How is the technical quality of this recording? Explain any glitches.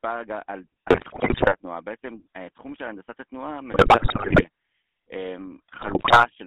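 The quality is poor. The speech carries plainly audible codec damage from start to finish, and three bursts of corruption break it up.

GSM full-rate codec coloring runs through the whole clip. The band stops at about 300 Hz and 3.5 kHz. The codec rebuilds the voice from a vocal-tract model driven by sparse, regular pulses, which fits the 13 kbps full-rate coder. The result is a plainly buzzy, gravelly roughness.

GSM bit errors strike from 0.88 to 1.55 s, 3.72 to 4.45 s and 5.74 to 6.27 s. Corrupted bits garble the decoder's filter, pitch and gain values frame by frame. The speech squawks, pops and gargles. The density points to a badly degraded radio link.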